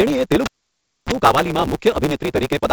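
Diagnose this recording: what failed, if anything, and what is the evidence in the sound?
A steady buzz near 138 Hz runs through the whole clip, and the speech is hurried, running about 1.6 times too fast. This is a block size mismatch (truncated) at the driver or buffer stage. One stage writes longer blocks than the next reads, so the tail of each block is discarded. The pattern fits 512-sample blocks being cut short.

From 0.45 s to 1.12 s there is a pop, then near silence, then a burst of 50 Hz mains buzz lasting about 60 ms, then a second pop as the sound returns. This is an analogue wiring fault: a live cable was pulled and plugged in, and the buzz came while only the tip was making contact.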